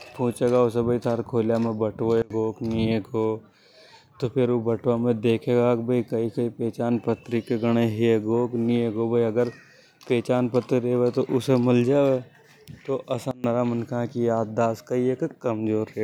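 At 2.22 s the speech level falls by about 24 dB in a single step and stays down until 2.30 s; a second drop of about 22 dB runs from 13.31 to 13.44 s. Both are a sudden gain jump, likely a digital gain setting applied instantly with no ramp. The speech and the background noise duck together abruptly rather than fading, then snap back to full level just as sharply.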